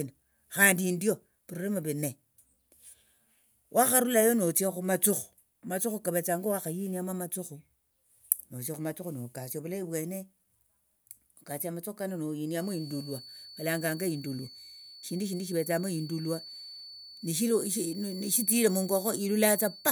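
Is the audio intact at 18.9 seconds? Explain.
No. At 18.9 seconds the speech carries a feedback whistle, a thin, steady tone near 4.5 kHz sitting well below the speech, swelling and fading slowly in level. It starts at 12.51 s, just after "nokasia amathukhu kano", and lasts to the end of the clip. The likely cause is a loudspeaker feeding back into the microphone, with the loop held right at the edge of feedback. One frequency keeps ringing without growing.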